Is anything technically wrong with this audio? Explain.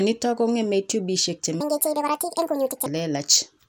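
Yes. From 1.6 to 2.86 s there is a section at the wrong speed. The likely cause is that this stretch was played back against the wrong clock, so the samples ran out about 1.68 times faster than they were recorded. Speed and pitch rise together: the speech abruptly becomes hurried and squeaky, lifted by roughly ten semitones, then snaps back to its natural rate and pitch when the section ends.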